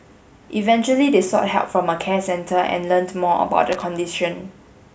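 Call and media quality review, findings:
Loose connector crackle, 3.72–3.82 s: worn or dirty contact making and breaking intermittently, chopping the speech signal into a brief irregular burst of scratchy crackle, about 0.1 s.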